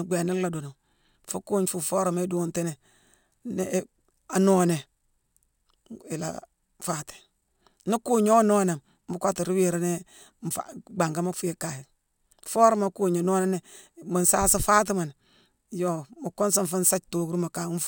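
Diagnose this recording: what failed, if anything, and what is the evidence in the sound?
Imaging from linear upsampling runs throughout, from sample-rate conversion. Straight-line interpolation, fitting a 24 kHz source raised to 48 kHz, leaves a mirrored image at 12–24 kHz, roughly 20 dB down, shimmering on sibilants.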